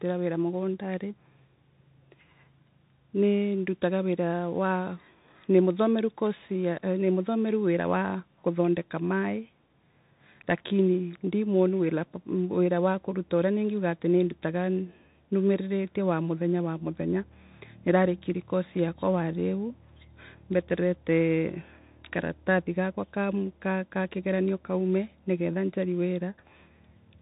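Throughout the speech, a Bluetooth CVSD headset codec leaves nothing above 3.8 kHz, which fits a 64 kbps link. Unlike a plain telephone band-limit, its one-bit up-down steps lag loud, fast sounds, so s sounds turn scratchy over a granular hiss.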